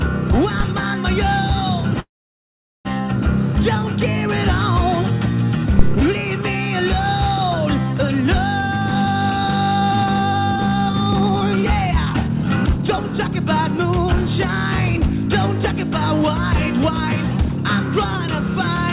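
Right at 0.60 s there's a phantom power thump, a supply switching on a live input, with the step pushed through the coupling capacitors as a deep knock that dies away in about 14 ms. From 2.0 to 2.87 s comes a call audio freeze. The last sound is stretched into a brief fading buzz, then roughly 0.78 s of silence, and the audio resumes where it left off. That's likely packets held up until the jitter buffer ran dry, leaving nothing lost but everything about 0.85 s late. A second phantom power thump lands at 5.79 to 6.02 s and is longer, decaying over about 52 ms. Then from 8.61 to 13.85 s there's jitter buffer speed-up. The buffer was over-full, so it trimmed pitch-period-sized slices again and again, running at about 114% and shaving roughly 0.7 s, so it sounds rushed but the pitch stays put. A milder round at 15.75 to 17.58 s runs at 104% and drops about a tenth of a second. Throughout, the call path's band limit shows as nothing above 4 kHz, which fits G.711 mu-law at 64 kbps.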